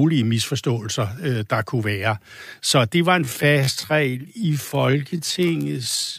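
From 3.19 s to the end of the clip, the speech is a time-stretched section, most likely from software lengthening this stretch to fill a set duration by repeating short slices of the signal while holding pitch steady. The pace drops abruptly to about 0.6 times the original rate, yet the pitch stays unchanged. The slowed speech drags, with syllables drawn out.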